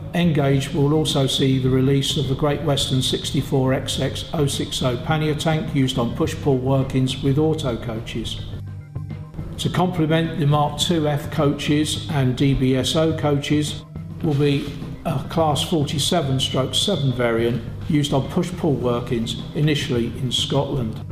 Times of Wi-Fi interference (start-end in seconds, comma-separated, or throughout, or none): none